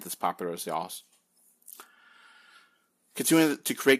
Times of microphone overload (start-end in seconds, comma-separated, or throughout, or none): 3.87-3.93